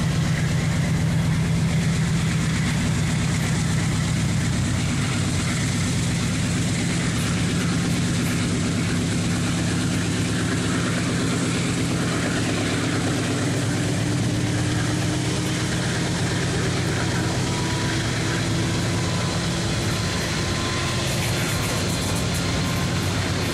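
At 2.83 s and again at 14.76 s you get compressed frames skipped: whole frames never get played, so the audio jumps ahead, by something like 70 ms the first time (a few frames' worth) and about 20 ms the second, which points to a single frame.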